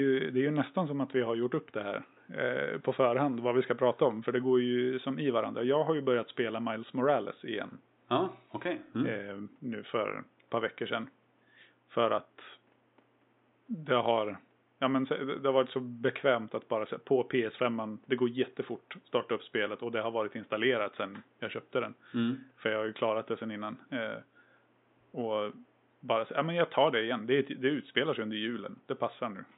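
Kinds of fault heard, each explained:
No faults detected in this speech recording.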